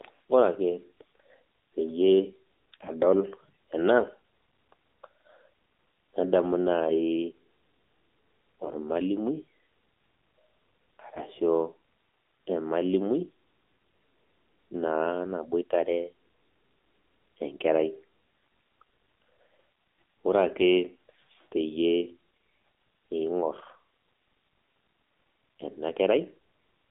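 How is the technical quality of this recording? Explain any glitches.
The recording has plainly audible damage from a low-rate mobile speech codec throughout, plus one brief corruption burst.

AMR narrowband mobile codec, whole clip: the audio passes only about 250 Hz to 3.7 kHz, and the low bit budget, consistent with roughly 7.4 kbps AMR-NB, makes the speech buzzy and synthetic. A spectrogram shows a hard ceiling near 3.7 kHz with nothing above it.

AMR bit errors, 8.64 to 8.72 s: flipped bits in the less protected part of a few 20 ms frames, at a rate of a few percent, misplace the excitation pulses and skew the pitch, gain and spectral values. Pitch and level hold roughly steady, but the sound turns hoarse and gargly. A spectrogram shows smeared, disordered harmonics over those 80 ms.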